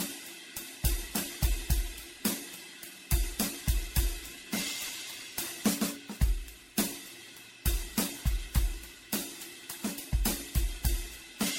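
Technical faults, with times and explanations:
Throughout: generation loss. The music sounds swirly, smeared and hollow, with blurred attacks and nothing above 16.5 kHz, which fits a low-bitrate MP3 chain. The likely cause is repeated decoding and re-encoding, roughly ten passes, each requantising on a shifted frame grid so noise and spectral holes pile up.
4.57–9.77 s: sample clock jitter. A gritty hiss and roughness rides on the music, strongest on loud, bright passages, at roughly 15 dB below the signal. The converter clock wanders by several microseconds, so samples land early or late, and the error grows with waveform slope.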